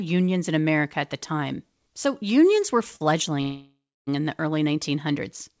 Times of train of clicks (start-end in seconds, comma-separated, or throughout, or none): none